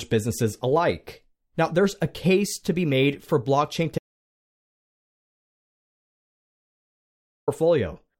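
At 3.98 s, just after "be made for blockchain", an audio dropout to silence cuts the speech off until 7.48 s, losing about 3.49 s. The input was likely lost while silence kept being written: a flat waveform line and an empty, black spectrogram band, with no room tone.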